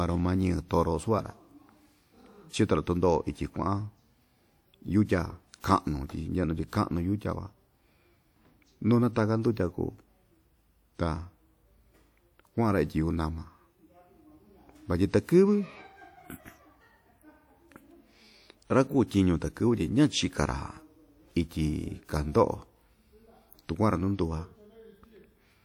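Pre-echo appears at 5.60 to 5.64 s, where a short hiss runs ahead of a sharp attack in the speech for about 37 ms. A transform codec spreads quantisation noise across a whole block, so when the onset lands late in that block, noise sized for the loud attack also fills the quiet gap before it. The attack loses its crispness and sounds smeared, announced by that short hiss.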